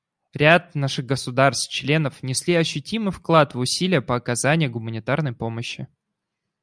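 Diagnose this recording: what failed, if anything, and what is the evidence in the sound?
Nothing failed: the speech recording carries no audible fault at any stage from capture to playback, so there is no evidence to report and no mechanism to trace.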